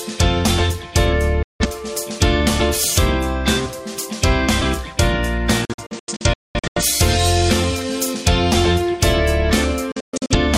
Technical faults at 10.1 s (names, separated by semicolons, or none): digital broadcast dropout